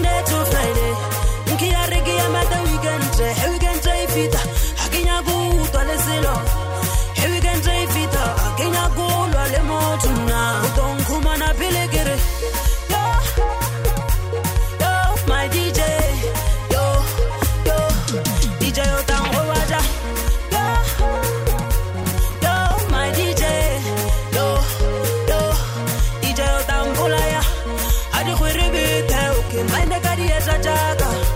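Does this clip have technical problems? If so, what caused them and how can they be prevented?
Yes, processor overload crackle appears from 22.03 to 22.97 s and from 29.49 to 29.88 s. Missed deadlines for buffers of a few milliseconds each drop short silent gaps, which show as dense vertical streaks and waveform dropouts. Larger buffers or a lighter processing load prevent it.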